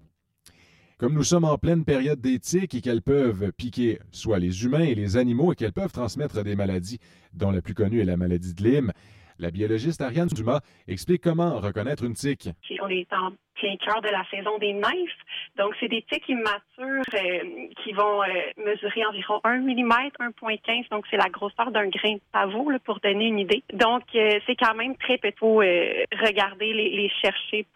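From the start to about 19.4 s the audio sounds hollow and phasey: that's channel delay (comb filtering), with one side roughly 10 ms late, carving notches from around 40 Hz up. There are also two brief jumbled moments, at 10.28 to 10.36 s and 17.04 to 17.12 s, where chunks play out of order, each a 40 ms chunk arriving one chunk late.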